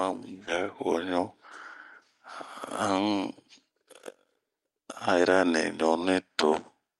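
Speech in which, at 0.47 to 0.49 s, the audio lurches forward with no gap, losing nearly half a second. This skip ahead happened when the stretch was dropped, on the way or by the jitter buffer, while later audio was already waiting. From 0.63 to 1.36 s the speech then sounds slightly hurried at an unchanged pitch, running at 107% speed. This jitter buffer speed-up comes from the receiver trimming short pitch-period pieces, some 50 ms in total, to shed excess buffered delay.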